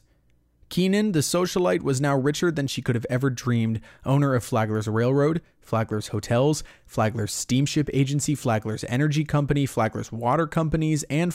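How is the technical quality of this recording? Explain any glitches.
No technical faults are audible.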